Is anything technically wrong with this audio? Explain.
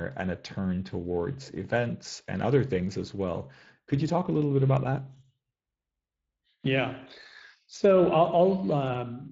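Yes. Speex codec coding runs through the whole speech clip. Its excitation model makes voices plainly hoarse and noisy, consistent with roughly 20 kbps, steady throughout, unlike intermittent dropouts.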